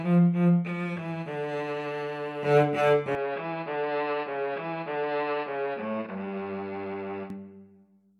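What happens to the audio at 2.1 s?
Nothing goes wrong at 2.1 s; the audio plays through that moment intact, with no dropout, click or distortion.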